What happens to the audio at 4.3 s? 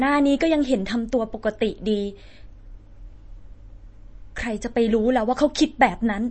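At 4.3 s the speech carries the same MP3 compression damage heard throughout the clip, likely from a low-bitrate encode around 32 kbps. Nothing survives above 8.4 kHz, and weak frequency lines flicker between frames, giving a watery swirl that a plain low-pass filter would not produce.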